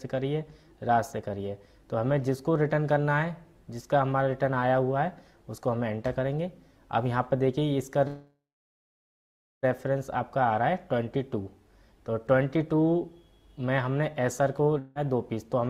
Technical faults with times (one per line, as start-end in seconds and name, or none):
8.07-9.65 call audio freeze
14.79-14.97 long network dropout